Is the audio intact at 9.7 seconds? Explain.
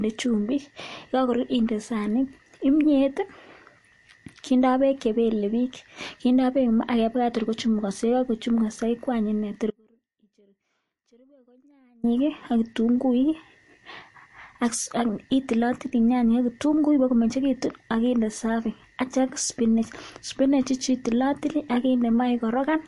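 No. At 9.71 s the audio drops out to a faint residue until 12.04 s, a gap of about 2.3 s. The wanted signal is likely lost upstream while the path stays live. The sound cuts off abruptly, leaving only a faint leak about 35 dB below normal.

MP3 compression also affects this moment, as it does the whole clip. Nothing is heard above 11.3 kHz. The damage is plainly audible: the speech sounds watery and swirly, with metallic chirps on s sounds. That likely points to a low bitrate of about 48 kbps.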